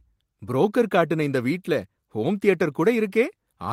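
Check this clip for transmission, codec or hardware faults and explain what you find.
No faults turn up anywhere in the recording, and the signal stays intact and continuous from the first moment to the last.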